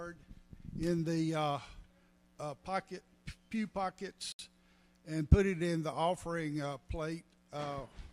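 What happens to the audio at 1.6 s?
Nothing goes wrong at 1.6 s: the audio plays through that moment intact, with no dropout, click or other fault.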